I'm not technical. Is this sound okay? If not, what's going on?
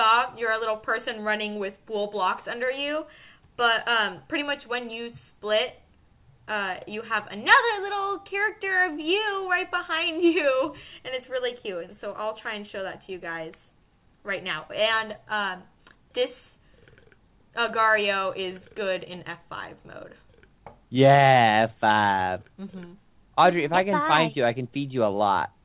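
Yes, no faults are heard.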